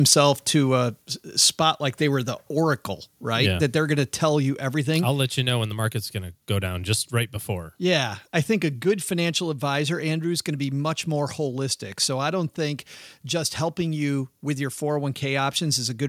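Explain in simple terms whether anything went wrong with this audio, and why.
A brief harsh crackle comes right at the start, from 0.12 to 0.14 seconds, just before "to a spot like". This is microphone overload. The input level was likely set too high, so the loudest peaks hit the recorder's ceiling and their tops were sliced flat, adding that rough edge.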